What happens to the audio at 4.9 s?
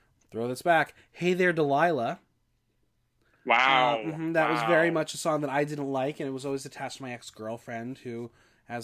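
Nothing goes wrong at 4.9 s: the speech carries straight through that moment with no dropout, click, distortion or other technical fault.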